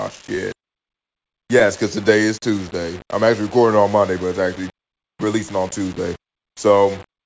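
All through the speech there is a gritty, grainy distortion clinging to quieter passages, with a coarse noise floor sitting roughly 20 dB below the signal. This is likely low bit depth without dither: the samples were rounded to a grid that sounds like about 6 bits, so the error tracks the speech rather than masking it.

The timing also never quite settles, because of clock drift between sender and receiver. The sender's clock runs roughly 4 percent slow, so the receiver's jitter buffer keeps draining and has to be topped up, which leaves the pacing subtly uneven from start to finish.

That drift shows up as repeated timing corrections from 0.34 s to 7.15 s. Short pieces keep being repeated, unevenly spaced but always lengthening, so the stretch plays at about 97 percent speed and gains around a fifth of a second in all. The result is an unsteady, slightly dragging tempo.

Early in that stretch, from 0.60 s to 0.65 s, one sound is held too long. 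This is a short stall from a late packet: the buffer ran empty, and the receiver stretched the last sound for 37 ms until the data arrived. Playback then resumed from the same point with nothing lost, though it now runs 37 ms later. The call codec's band limit runs throughout, with nothing above 8 kHz, which fits G.722 at 64 kbps.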